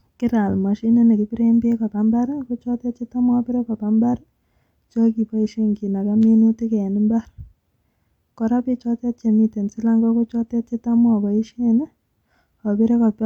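No technical faults are audible anywhere in the recording.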